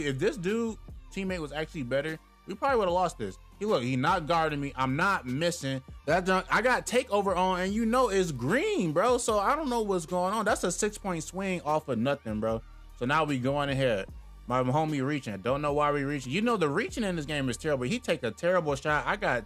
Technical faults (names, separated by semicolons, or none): none